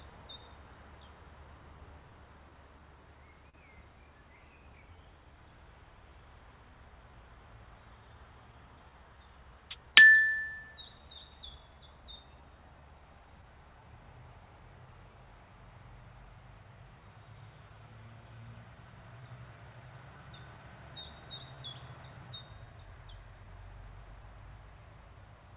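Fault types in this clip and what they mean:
Clock drift between sender and receiver: The sending clock runs roughly 3% slow, so the receiver's buffer keeps draining and timing hiccups recur unevenly throughout.
Repeated timing corrections: From 0.1 to 25.2 s the receiver stretches the audio to about 98% speed, adding roughly 0.7 s.
Scattered short gaps: Lost or late packets are patched by continuing the previous sound, with about three between 3.49 and 7.76 s and about seven very brief ones between 10.98 and 19.82 s.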